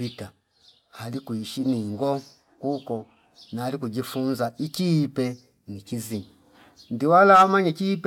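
Nothing stood out on listening to the speech in this recording.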